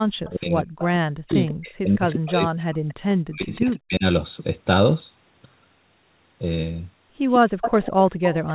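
At 0.25 s a faint delayed copy of the speech appears, about 30 dB below it, until 0.31 s. This is an echo leak. The likely cause is a loudspeaker on the far end whose echo canceller let some of its microphone pickup through and sent it back. The copy trails the original by 147 ms throughout.

From 0.26 s to 2.85 s the speech dips hard, by up to roughly 40 dB, for about two seconds in total. This is speech suppressed in double talk. Both sides were likely talking, and the echo canceller turned the near talker down along with the echo.

Inside that stretch the echo leaks again. At 0.79 to 0.84 s it is strong, about 15 dB down. At 1.28 to 1.51 s it is about 20 dB down. Then it returns at 2.88 to 3.14 s, about 25 dB down.

From 3.2 s to 4.05 s a second suppression cuts the speech for about 0.7 s. An echo sits within it, at 3.55 to 3.77 s, about 20 dB down. The loudest leak starts at 7.29 s and runs to the end, only about 10 dB below the speech. 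All of it stays inside the 4 kHz band of the G.711 call path.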